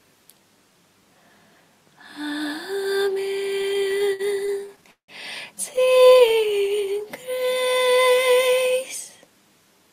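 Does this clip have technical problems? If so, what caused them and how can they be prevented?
Yes. Repeated stalls (stutter) occur from 3.61 to 5.10 s and from 5.76 to 6.67 s. Packets arrived late or too slowly, emptying the jitter buffer 18 and then 13 times. The receiver stretched the last sound over 430 ms and 164 ms, with gaps up to 173 ms, so nothing is lost but the audio drags. A larger adaptive jitter buffer on a steadier network path prevents this.

A jitter buffer slow-down overlaps from 6.33 to 8.16 s. With the buffer low or its target delay just raised, the receiver repeated single pitch periods or bits of pauses, adding 250 ms, so the audio runs at 87% speed at the same pitch. Keeping network jitter low, so the buffer rarely needs refilling, prevents this.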